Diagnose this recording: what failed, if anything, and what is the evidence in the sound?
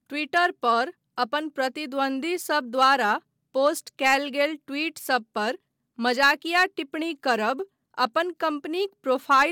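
Nothing in this speech recording points to a failure at any stage of the chain. There is no event in the sound that calls for a diagnosis.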